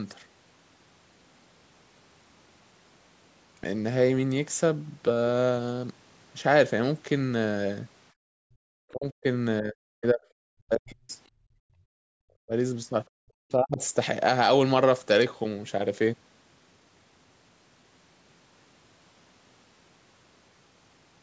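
Speech clip with echo-canceller faults. Background gated by the echo canceller cuts the room sound by about 40 dB at 8.13–8.6, 11.38–12.08 and 13.09–13.19 s while the far end plays. The talker's speech dips sharply, by as much as 40 dB, at 8.88–9.25, 9.61–10.24, 10.58–11.1, 12.36–12.52 and 13.47–13.8 s, likely speech suppressed in double talk as the canceller mistakes overlapping speech for echo. The call microphone processing limits content to 8 kHz.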